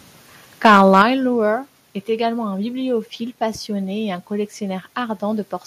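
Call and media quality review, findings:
Microphone overload, 0.65 to 1.02 s: harsh crackly edge on the loudest peaks, tops flattened, about 5 dB over full scale, a few percent of samples. Likely the mic input gain set too hot.

Microphone volume stepped down, 1.02 s and 2.04 s: sudden level drops of about 6 dB and then about 2 dB, the second right before "également un bibliophile passionné". Likely the call app's auto-gain trimming the input after that clipping.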